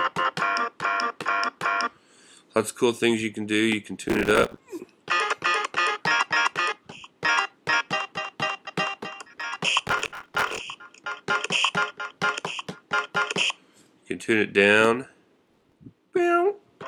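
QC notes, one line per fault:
4.09–4.58 s, 9.88–10.59 s, 15.47–15.78 s: processor overload crackle. Dozens of missed deadlines in a row replay stale audio with hard edges, heard as gritty tearing. The grain suggests 5 ms buffers.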